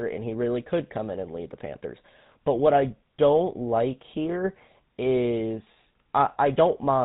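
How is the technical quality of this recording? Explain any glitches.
The technical quality is limited by codec damage throughout, plus one brief dropout.

Throughout, the sound has the GSM full-rate codec character, consistent with 13 kbps: pulse-driven vocal-tract modelling leaves buzzy, gravelly roughness and nothing above 4 kHz.

At 5.74–5.76 s, lost GSM frames: a single 20 ms frame was replaced by repeating the previous frame's settings, heard as a short, rough metallic ring.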